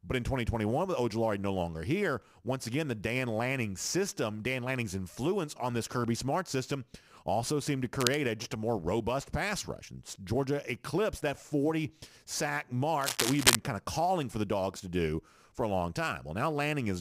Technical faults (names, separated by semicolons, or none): sample clock jitter; cable scratch noise